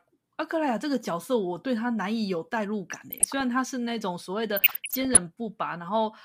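Speech with short noise blips from 2.90 to 3.41 s and 4.57 to 5.19 s: DAB burbling, where roughly half-percent bit errors corrupt MP2 sub-band levels frame by frame.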